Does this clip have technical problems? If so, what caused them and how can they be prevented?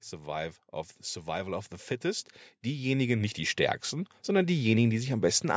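Yes. Automatic gain rising from 1.24 to 5.35 s: the control judged the speech too quiet and pushed gain up about 9 dB, so voice and background swell together. Set a healthy input level so the AGC doesn't need to chase it.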